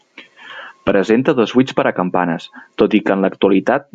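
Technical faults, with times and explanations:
1.19 to 3.94 s, channel delay (comb filtering): one channel lags the other by a tiny offset, which fits a delay of about one sample. The mono sum cancels around 20 kHz, so the speech sounds dull and rolled-off in the top end rather than hollow.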